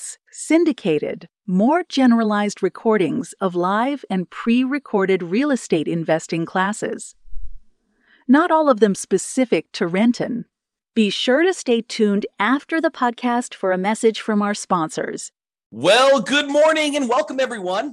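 From 12.18 to 14.20 s, and again from 16.62 s to the end, the speech plays 5.7% fast and 96 cents sharp. This is likely a drift correction step in clock-matching playback.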